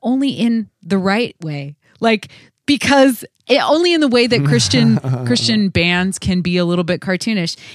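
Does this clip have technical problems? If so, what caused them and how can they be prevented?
Yes. The software keeping two device clocks in step likely changed the playback rate in a single jump to rebalance its buffer, a drift correction step. From 5.00 s to 6.92 s the speech runs about 5.6% slower and drops by roughly a semitone (about 99 cents), with speed and pitch shifting together before snapping back to normal. Preventing it means locking both devices to one shared clock, or using a resampler that corrects drift in tiny continuous increments instead of one abrupt step.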